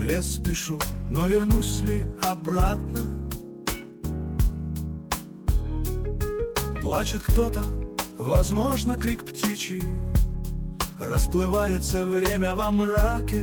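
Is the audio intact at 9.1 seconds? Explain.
Yes, the audio at 9.1 seconds is intact, with no dropout, click, distortion or other fault at that moment.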